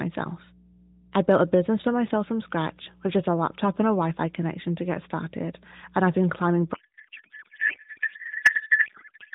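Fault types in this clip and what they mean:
Mains hum: a ground loop or nearby transformer leaks the 60 Hz power line into the signal, leaving a steady low tone throughout, roughly 25 dB below the speech.
Codec payload misread: octet-aligned AMR frames are decoded as bandwidth-efficient, so fields land in the wrong places; from 6.74 s, after "and I've been climbing", speech turns to garbled warble until the end.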